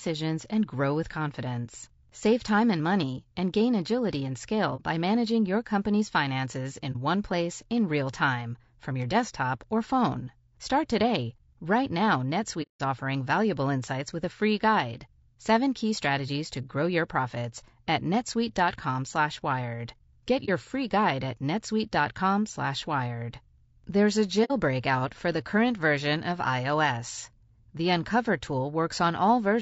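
Throughout the speech the sound is rough and grainy, with a noisy haze filling the gaps between the harmonics and an upper band that sounds thin and synthetic rather than natural. This is plainly audible low-delay AAC compression, likely AAC-ELD at a rate around 32 kbps. At this low bitrate the encoder spends its limited bits coarsely and approximates the top band.

Against that, the sound briefly fades out and back in at 4.76 s, 6.92 s, 12.62 to 12.81 s, 20.45 s and 24.44 to 24.51 s. Each gap has soft edges. These are AAC frame losses with muting. The decoder zeroed the missing spectrum, and the overlapping windows blend the silence into the neighbouring audio. The shorter gaps fit one lost frame, 24.44 s fits two, and the longest, at 12.62 s, fits about six.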